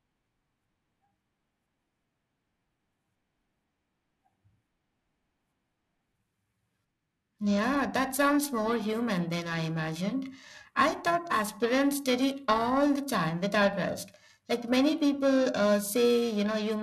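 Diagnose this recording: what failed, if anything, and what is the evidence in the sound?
The converter failed, with periodic clock jitter present throughout the speech. A rough, metallic edge rides on the voiced sound and disappears in pauses. Interference is wobbling the sampling clock at around 1 kHz. This puts sidebands about 1 kHz either side of every component, harshest on high frequencies.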